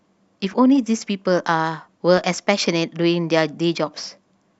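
Weak DAB reception lets bit errors slip past the error correction into the MP2 audio data, at a rate of around 0.2 percent. This produces DAB burbling from 0.42 to 0.54 s and again from 2.17 to 2.34 s. Corrupted samples put short blips of noise into individual sub-bands, and corrupted scale factors make sub-bands jump in level for up to a frame, which fits roughly seven and then ten damaged frames. Over the speech, each burst adds these short noisy blips.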